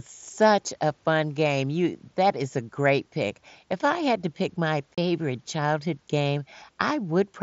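Speech over an mSBC headset link has one unconcealed Bluetooth headset packet loss from 4.95 to 4.98 s. A 30 ms burst of lost packets is replaced by silence or an idle pattern, showing as a sharp-edged gap in the waveform and a vertical stripe on the spectrogram.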